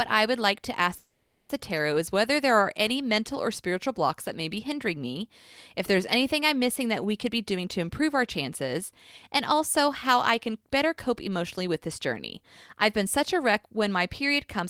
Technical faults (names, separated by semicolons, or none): call audio freeze; jitter buffer speed-up